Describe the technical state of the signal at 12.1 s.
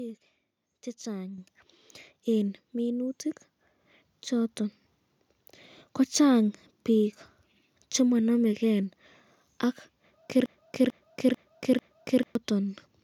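At 12.1 s you're inside a broken-record loop running from 10.46 to 12.35 s: the same 0.44 s slice of speech repeats four times back to back, likely because the stream stalled and kept resending its last fragment, so the real audio there is gone.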